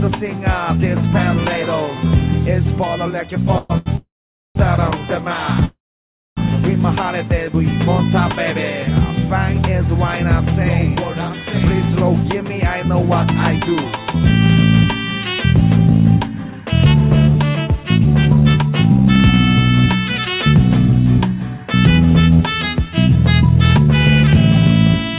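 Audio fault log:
3.58–3.72 s, 3.96–4.57 s and 5.65–6.39 s, call audio freeze: the sound hangs as a fading buzz, dropping to silence for about 0.47 s and 0.6 s in the longer two, then resumes exactly where it stopped. That differs from a dropout, which loses material. The likely cause is delayed packets emptying the jitter buffer.
3.78–3.88 s, short stall from a late packet: one sound is held about 84 ms too long with a slight buzzy dip, then continues from the same point. It has no silent stretch, which sets it apart from the longer freezes beside it.
12.35–18.70 s and 20.49–24.31 s, jitter buffer speed-up: the sound runs about 6% faster at unchanged pitch and feels hurried. Roughly 0.4 s and 0.3 s are trimmed in small pitch-period pieces as the receiver drains excess buffered delay, unlike resampling, which would raise the pitch.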